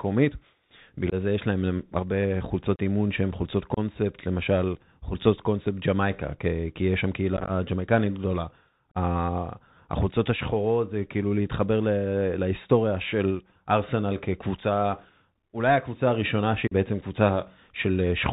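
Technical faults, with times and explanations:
throughout Bluetooth CVSD headset codec: the 64 kbps one-bit delta link tracks only up-or-down steps, so loud high-frequency moments outrun the adapting step and distort, and s sounds turn scratchy. A spectrogram shows a hard ceiling at 4 kHz over a grainy hiss floor.
1.10–1.14 s, 2.76–2.79 s, 3.74–3.79 s, 7.37–7.51 s, 8.91–8.98 s, 16.67–16.73 s unconcealed Bluetooth headset packet loss: voice packets vanished and silence or an idle pattern replaced them, losing 19, 30, 26, 68, 34 and 41 ms. The 7.37 s loss is scattered as short bursts over 120 ms and sounds chopped. The waveform shows gaps with sharp, abrupt edges, and the level returns briefly quieter.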